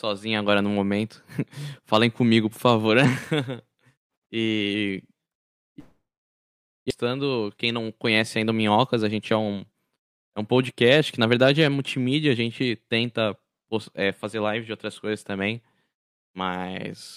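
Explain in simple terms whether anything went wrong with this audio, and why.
Two things went wrong in this speech.

At 5.79 s the sound stops being real. The last bit of sound carries on as a fading buzz, then gives way to near silence until 7.05 s. About a second of the recording is simply gone. When the sound returns, it picks up later, without the missing part. This is a long network dropout. The likely cause is that the connection stopped delivering audio for that stretch.

Right after that, from 7.57 to 8.23 s, the speech runs slightly hurried, about 8% fast, at normal pitch. This is a jitter buffer speed-up. Delayed audio had piled up in the receiver's waiting area. To catch up, it cut out many tiny slices, roughly 70 ms in total. Normal pace returns just before "ainda o".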